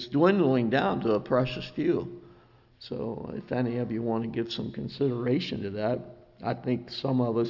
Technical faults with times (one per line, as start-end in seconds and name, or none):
none